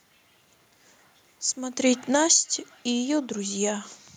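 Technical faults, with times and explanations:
1.8 to 3.83 s, automatic gain falling: the speech and the room noise beneath it sink together by about 8 dB, because the gain control judged the input too loud or its background noise too strong and slowly wound its gain down, unlike the talker moving around one and a half seconds.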